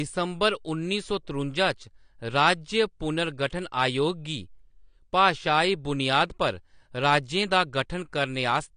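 Throughout the speech, the top end stops dead at about 9.9 kHz, leaving a flat ceiling on a spectrogram. Sibilants sound fizzy and vowels warble, plainly audible damage that likely comes from AAC compression at a low bitrate, around 32 kbps.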